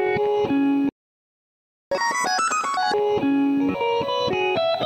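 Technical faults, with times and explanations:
0.89–1.92 s, playback stall: the sound halts mid-flow and the output goes completely silent for about 1.02 s before carrying on. The likely cause is the player running out of buffered data or its output thread being blocked, so nothing reaches the output until it recovers. Unlike a dropout that loses material, the gap is a clean, sustained silence followed by resumption rather than a brief click or skip.
1.92–2.94 s, catch-up at higher speed: immediately after the silence the backlog plays at double speed for about one second, so everything runs hurried and pitched up by roughly ten semitones, then snaps back to normal rate. The player resamples the queued audio to win back the time lost in the stall. What separates this from a plain pitch-shift fault is that tempo and pitch rise together, only right after the stall, and both return to normal once the lost second is recovered.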